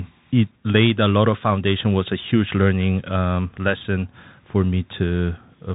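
The speech has passed through a Bluetooth CVSD headset codec, one bit per sample at a rate that fits 64 kbps, with an adaptive step that cannot keep up with fast, loud changes. Throughout, nothing above 3.8 kHz survives, s sounds turn scratchy, and a granular hiss sits underneath.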